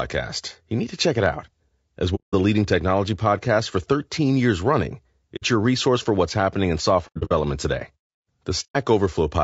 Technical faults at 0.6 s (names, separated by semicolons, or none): low-delay AAC compression